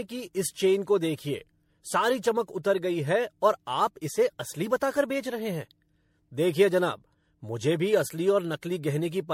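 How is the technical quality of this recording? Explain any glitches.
The quality is degraded throughout by generation loss. Across the whole clip the speech sounds swirly, hollow and smeared, with blurred consonant onsets and nothing above 16.5 kHz. This likely comes from MP3 encoding around seven times at something like 64 kbit/s, with each pass adding fresh quantisation noise and spectral holes.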